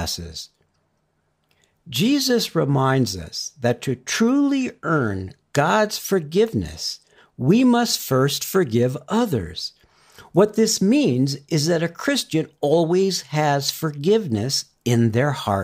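Listening through the speech, nothing stood out as a technical problem at any point.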